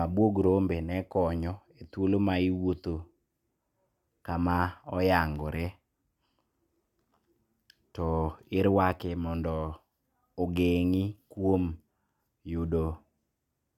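Periodic USB or driver dropouts begin at 5.36 s and continue to 13.38 s. Something on the system stalls the USB bus or the audio driver every 2.0 s, and each stall drops a tiny fraction of a millisecond of audio, replaced with silence. In the speech, this is heard as a handful of small, evenly spaced ticks, each a brief hole in the waveform.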